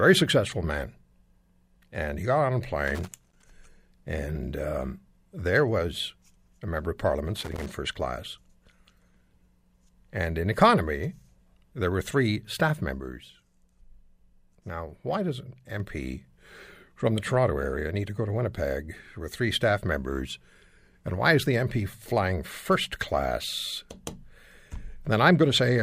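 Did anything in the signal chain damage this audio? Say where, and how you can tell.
Yes. The analogue wiring has a loose connector crackle, heard from 2.88 to 3.50 s and again from 7.36 to 7.71 s. A worn or dirty contact in the cable or jack keeps making and breaking as it shifts, so the signal is chopped on and off many times in quick succession. This comes through as irregular bursts of crackle and scratching over the speech, not as a steady noise, which points to a physical contact and not a digital fault.

There is also a sudden gain jump. From 13.0 to 15.8 s the level sits about 4 dB lower, and the speech and the background noise drop together. Because both move in step with no ramp, the cause is likely a digital gain stage changing from one sample to the next, such as a setting change or bit shift applied without a ramp, and not a change at the talker or the room.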